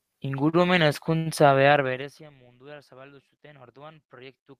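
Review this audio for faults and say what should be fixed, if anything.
Short stalls from late packets at 0.49 to 0.55 s and 1.17 to 1.28 s: the jitter buffer ran dry, so the speech gets held about 36 ms, then 87 ms, with nothing lost. A slightly deeper or adaptive jitter buffer should absorb delays like these.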